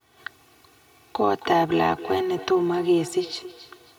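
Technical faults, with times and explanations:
Throughout: channel delay (comb filtering). One channel arrives roughly 3 ms behind the other, and when the two are summed to mono the shared sound cancels at evenly spaced frequencies, with the first notch near 200 Hz, leaving the speech hollow and phasey.
1.34 s to the end: feedback echo between two devices. A second device in the room replays this speech into the first device's microphone, whose echo canceller cannot remove it, so the sound returns every 300 ms or so, thinner and ringing, peaking about 14 dB below the speech.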